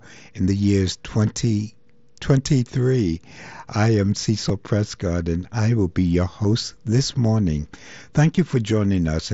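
Concealed Bluetooth headset packet loss occurs at 4.49 s, 6.44 s and 8.36 s. Audio packets from the headset went missing, and the receiver filled each gap by repeating the closest-matching stretch of the most recent waveform. The first two gaps last about 7.5 ms, which fits a single lost packet, and they are almost inaudible. The one at 8.36 s runs 15 ms, which suggests two packets, and is heard as a brief buzzy smear with a slight warble as the real audio resumes over the mSBC headset link.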